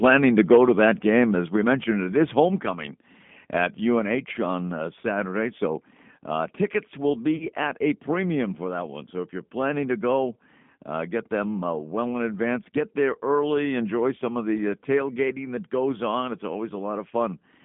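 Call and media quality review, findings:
Whole clip: narrow, rough, slightly synthetic speech, with plainly audible G.729 codec damage. Band limited to roughly 150 Hz to 3.5 kHz. Nothing on top. Vocal tract filter plus sparse pulse excitation at 8 kbit/s. Points to G.729A on the call leg.

At 1.56 s: sudden level drop of about 4 dB across speech and background. Single step, no fade. Likely the microphone volume stepped down by the client's automatic input gain control. Level stays lower afterwards.

7.36 to 7.47 s: VoIP packet loss concealed by the speech codec. About 40 ms of audio missing, which fits four lost 10 ms frames. The decoder extrapolates the last pitch and filter into a buzzy tone or coloured noise that fades. Speech stays weak briefly after packets resume.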